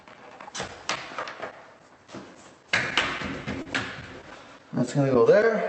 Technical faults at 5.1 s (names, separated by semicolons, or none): none